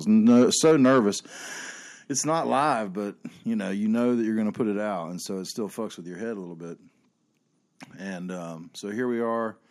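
From 0.29 to 1.0 s the speech shows microphone overload: the peaks run about 4 dB past the converter's limit, and a few percent of samples are flattened at the converter's ceiling. The likely cause is an input gain set too high for the talker, so the loudest syllables lose their tops and take on a harsh, crackling edge.

The microphone volume is then stepped down four times, each a sudden drop in the level of voice and background together. The first comes at 0.71 s, about 2 dB, while the overload is still audible. The next, at 1.71 s, is the largest at about 5 dB. At 2.73 s, just before "but you know you", it falls about another 2 dB. At 4.77 s, between "going to put it" and "out and so it", it drops about 3 dB more. The pattern is likely automatic gain control in the call software reacting to the earlier clipping by cutting the device input in discrete steps rather than smoothly, leaving the later speech noticeably quieter than the start.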